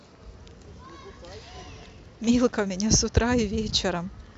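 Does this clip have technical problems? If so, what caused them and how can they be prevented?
Yes. From 0.16 to 4.32 s, a faint, regular ticking sits under the speech, roughly ten per second. These are clock slip clicks, likely from two unsynchronised devices a few hundred ppm apart, each slip dropping or repeating one sample. Locking both devices to a single shared clock prevents them.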